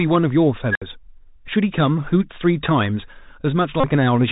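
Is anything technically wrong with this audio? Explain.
Yes, there are a few things going on here, one that runs through the whole clip and three short events.

The whole clip carries the Bluetooth CVSD headset codec at 64 kbps, and the damage is plainly audible. CVSD codes each sample as one up-or-down bit with an adapting step, so nothing above 4 kHz survives. S sounds come out scratchy, and there's a granular hiss sitting under the speech.

From 0.71 to 0.82 s there's an unstable filter. A recursive filter with bad coefficients runs away: a tone around 1.5 kHz swells over roughly 46 ms until it clips, then the output overflows and drops to about 64 ms of silence before it resets.

There are two Bluetooth headset packet repeats, at 1.47 s and from 3.80 to 3.85 s. When voice packets go missing, the chip re-decodes the last good packet every 3.75 ms, giving a buzz near 267 Hz. The first is a brief blip of about 11 ms, consistent with roughly three lost packets. 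The second buzzes for about 34 ms, which fits around nine.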